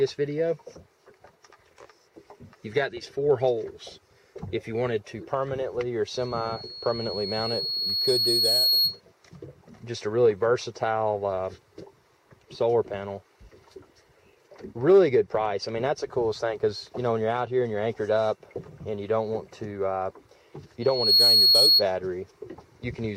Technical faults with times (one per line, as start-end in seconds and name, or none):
6.17-9.01 loudspeaker feedback squeal
20.81-21.84 loudspeaker feedback squeal